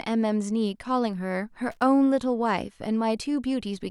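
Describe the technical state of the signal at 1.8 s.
At 1.8 s the speech is hit by loose connector crackle. It runs from about 1.72 s to 1.82 s, roughly a tenth of a second. A worn or dirty contact is making and breaking as it shifts. Each break chops the signal off for an instant. Any DC sitting on the line jumps with each break and adds pops. The result is a short, irregular burst of scratchy crackle over the speech.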